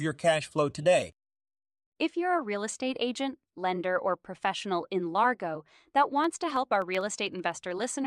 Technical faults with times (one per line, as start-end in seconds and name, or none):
6.24-7.97 periodic USB or driver dropouts